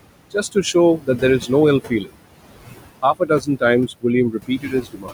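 From the start, the background pumps with the sound: the room noise, which sits about 12 dB below the speech, sinks in the gaps and swells back under each phrase. These are noise suppressor artifacts. The suppressor pulls the bands it judges to be steady noise down by about 21 dB, frame by frame, so the floor keeps shifting.

Between 0.98 and 1.22 s, part of the speech turns faint and swallowed, losing about a tenth of a second of sound by up to about 14 dB. From 3.02 to 3.62 s it happens again, over roughly a fifth of a second with dips near 19 dB. The worst stretch runs from 4.31 s to the end, where about half a second sinks by as much as about 21 dB. This is speech cut by the noise suppressor: it mistook these quieter parts of the speech for background and turned them down with the noise.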